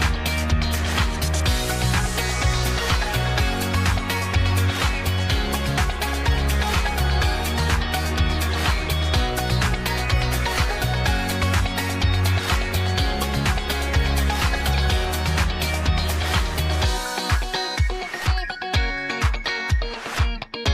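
Nothing goes wrong anywhere in this one; there's simply no technical fault to point to.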